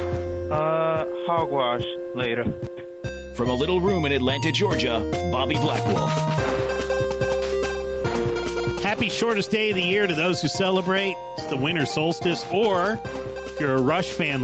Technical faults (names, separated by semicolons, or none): gain pumping